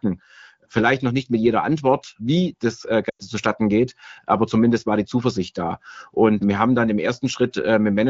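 From 3.09 to 3.26 s, radio errors caused lost AMR speech frames (about 100 ms, consistent with five 20 ms frames). The wideband decoder repeated its last good settings at falling gain, so the speech smears briefly, fades, and returns roughly.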